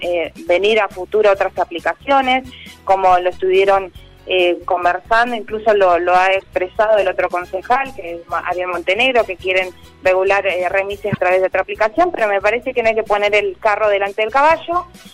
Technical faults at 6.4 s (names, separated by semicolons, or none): broken MP3 bit reservoir